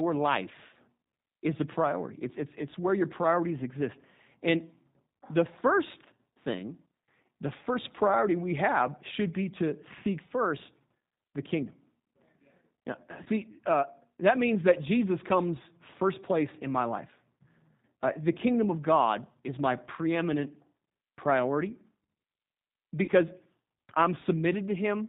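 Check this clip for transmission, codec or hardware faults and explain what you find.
There are two problems here, both from the phone path. The whole clip runs through the G.729 codec at 8 kbit/s, which cuts everything above 4 kHz and rebuilds the speech from a synthetic model, so it sounds rough and a bit synthetic.

There's also VoIP packet loss concealed by the speech codec, at 13.23 to 13.29 s just before "uh that means that", and again at 23.04 to 23.11 s. The decoder stretches its last pitch and filter over roughly 30 ms and 40 ms of missing audio, producing a fading buzzy tone or coloured noise.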